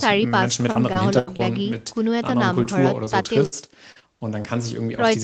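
From 0.71 to 1.41 s, repeated packet loss leaves several holes patched by extending the last sound, giving choppy, robotic speech with pieces missing. Short concealed packet loss at 2.63, 3.05 and 3.23 s fills roughly 20 ms gaps from preceding audio, heard as brief smears or wobbles. A burst of packet loss at 3.46 to 3.54 s drops about 60 ms; the receiver stretches and fades the last sound, then resumes with that stretch gone. Further short concealed losses at 3.92, 4.00 and 4.42 s cause more momentary wobbles, with the one at 3.92 s longer, at about 40 ms.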